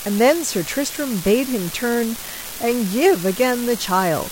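A speech clip with an unreliable data bit throughout: one marginal data line flips randomly, adding equal spikes of about -18 dBFS, heard as steady crackle continuing through pauses.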